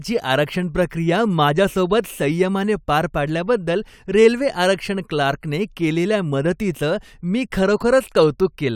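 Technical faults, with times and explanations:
No technical faults detected.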